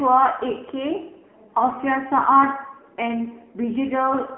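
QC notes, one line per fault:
Throughout: AMR narrowband mobile codec. The speech is buzzy and synthetic, squeezed into a phone band of roughly 250 Hz to 3.4 kHz, with heavy damage consistent with a low mode near 6.7 kbps. A spectrogram shows a hard ceiling at 3.8 kHz, empty above, and a thin low end.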